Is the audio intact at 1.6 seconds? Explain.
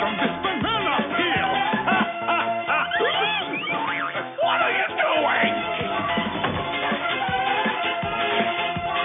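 Yes, at 1.6 seconds the audio is intact, with no dropout, click, distortion or other fault at that point.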